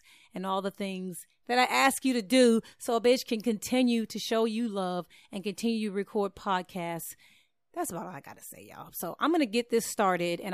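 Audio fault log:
No faults heard anywhere in this speech recording.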